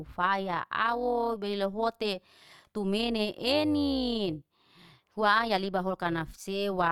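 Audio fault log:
Throughout, overlap-add ripple: the speech carries a metallic buzz with extra tones around the voice, a ripple of about 6 dB riding on every syllable at roughly 200 Hz. The audio was rebuilt from windowed frames whose overlaps don't sum evenly, so the level dips and swells once per frame.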